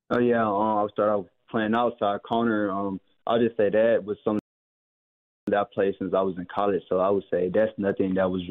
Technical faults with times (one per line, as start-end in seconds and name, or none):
4.39-5.47 rebuffering stall